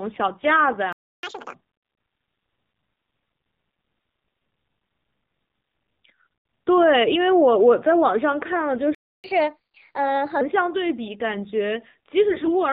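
Throughout, the speech carries the AMR narrowband mobile codec: nothing above 4 kHz, with a buzzy, synthetic vocal quality that points to a low mode near 7.4 kbps, not mere band-limiting. At 0.92 s the sound cuts to silence for 0.31 s, a playback stall, likely from the player running dry. Unlike a dropout, it resumes where it stopped. A catch-up at higher speed follows from 1.23 to 1.54 s at 2.0 times speed, with pitch raised by roughly 10 semitones. That chipmunk rush distinguishes it from a plain skip. A second silent stall of 0.29 s runs from 8.95 to 9.24 s. Then a gentler catch-up at 1.25 times speed, about 4 semitones higher, lasts until 10.41 s. From 12.30 to 12.63 s, AMR bit errors make the speech hoarse, scratchy and gargly while keeping its rough pitch and level. That preserved contour separates it from a lost-frame gap or concealment.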